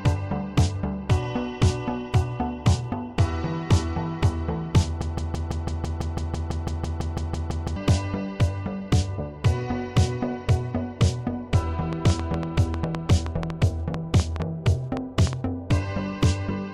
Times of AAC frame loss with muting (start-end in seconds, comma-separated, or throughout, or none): none